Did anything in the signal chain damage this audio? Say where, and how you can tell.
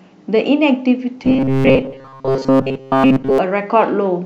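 Yes. From 1.25 to 3.38 s the speech turns into a stiff, metallic buzz locked near 134 Hz that still loosely follows the words. This is robotic sound from repeated short buffers, likely a starved driver or buffer looping a 7.5 ms chunk in place of most of the real audio.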